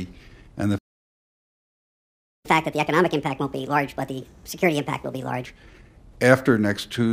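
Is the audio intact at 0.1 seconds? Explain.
Yes, the audio is intact at 0.1 seconds, with no dropout, click, distortion or other fault at that point.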